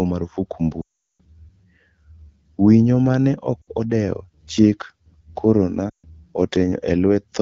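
Lost AMR speech frames strike at 0.82–1.21 s, where the sound drops to near silence within two frames well before resuming; at 3.62–3.70 s, a brief drop to near silence just before "odewo chik"; and at 5.89–6.07 s. Unlike a clean dropout, each gap smears the previous sound before decaying.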